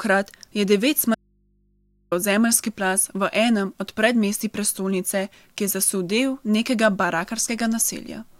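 At 1.15 s the speech cuts abruptly to a faint hum about 40 dB down, returning at 2.12 s on "zemeljski plaz v enem". This audio dropout to a faint residue, likely a signal break with the input left open, shows as a flattened waveform and thin low hum lines on the spectrogram.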